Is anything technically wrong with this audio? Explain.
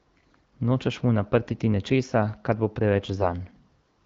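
Yes. From 1.48 to 1.56 s, just before "nečesa kar bo", there are AMR bit errors. A weak link flipped some of the less protected bits in the coded frames, while the check on the important bits still passed, so the decoder trusted them. The 80 ms span fits four 20 ms frames, with roughly 5 percent of bits wrong. The excitation pulses and fine pitch, gain and spectral values land off target, so the speech keeps its rough level but turns scratchy and gargly there.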